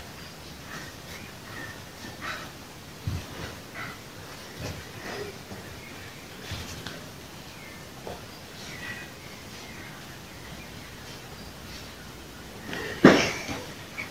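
No technical faults can be heard anywhere.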